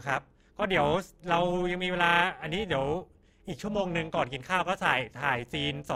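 From start to finish the speech carries overlap-add ripple, a metallic buzz with extra tones around each sound. Somewhere in processing the audio was chopped into windowed frames and stitched back together, but the overlapping windows don't add up to a flat gain. So the level dips and swells once per frame, around 400 times a second, by about 11 dB.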